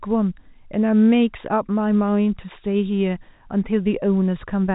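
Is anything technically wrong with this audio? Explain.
No, nothing in this speech clip points to a technical problem. What can be heard is ordinary G.711 telephone coding: the sound stops at about 3.8 kHz, and a faint quantisation hiss rises and falls with its level, as expected from a 64 kbps A-law telephone path.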